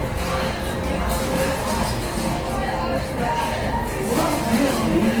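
From start to finish the audio carries plainly audible Opus compression damage, likely from the codec running in its CELT music mode at a rate that points to roughly 16 kbps. Short of bits, the encoder keeps each band's energy but refills the detail with folded or noise content, so tonal parts come out rough, grainy and hissy rather than swirling. Bandwidth stays fullband, with content reaching about 20.2 kHz.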